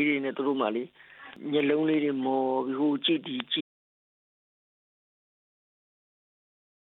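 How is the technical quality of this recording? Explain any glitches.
The recording has one serious fault: an audio dropout to silence from 3.61 s to the very end, about 3.25 s. The sound stops abruptly mid-flow and never returns. The likely cause is that the input was lost, through a disconnected device, a broken link or an accidental mute, while the recorder kept writing silence. Unlike a natural pause or a noise gate, the gap holds silence with no room tone, and there is no fade.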